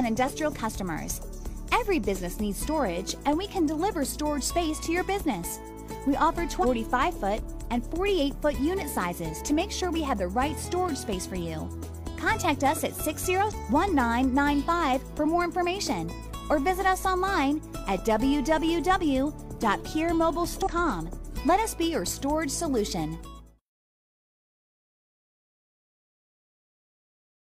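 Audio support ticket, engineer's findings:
Damaged data in the compressed stream. Brief glitches at 6.60–6.65 s, 13.47–13.52 s and 20.62–20.68 s, each about 50 ms. Probable component: decoder input. Corrupted bytes break frame parsing. Decoder loses sync, resyncs at the next header.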